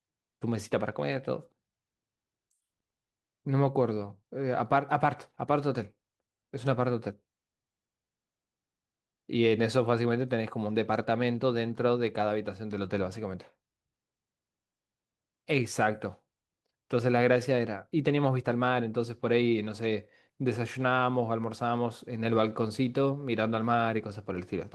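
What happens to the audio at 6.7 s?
At 6.7 s the speech carries on intact, with no dropout, click, distortion or other fault at that moment.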